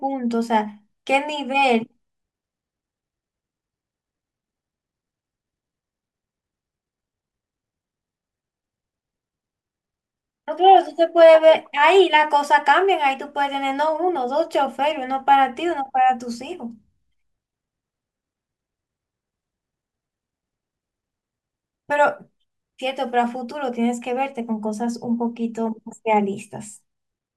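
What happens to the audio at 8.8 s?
Nothing goes wrong at 8.8 s; the speech carries on intact through that moment, with no dropout, click, distortion or other fault to be heard.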